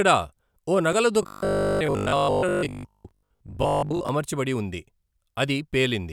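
Robotic sound from repeated short buffers runs from 1.23 to 4.09 s in this speech recording: the voice becomes a rigid, metallic 50 Hz buzz. The likely cause is late-arriving audio, with a 20 ms chunk replayed through most of that span instead of new sound.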